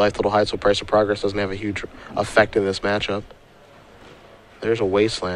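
Nothing here stands out as a technical fault, so there's no problem to point to anywhere in the audio.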